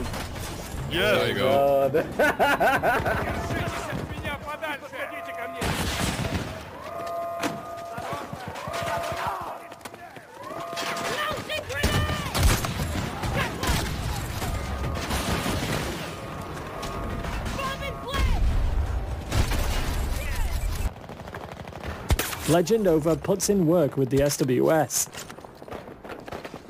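A gritty, inharmonic fizz runs through the whole audio, roughly 20 dB below the signal. This is crude rate conversion by repeating samples with no filtering, consistent with a 32 kHz to 44.1 kHz change.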